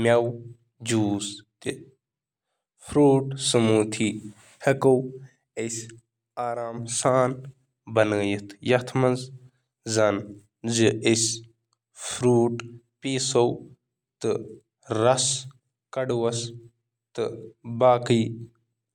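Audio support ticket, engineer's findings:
No technical faults found on the speech signal: level, continuity and timing hold steady throughout, with nothing needing action on the playback chain.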